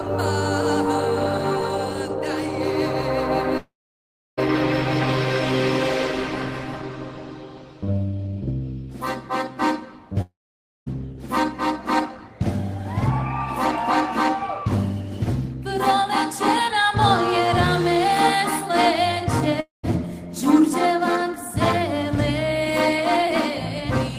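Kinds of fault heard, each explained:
Long network dropout: three times the sound turns to a fading buzz, then silence of up to 0.68 s, likely from audio lost in transit.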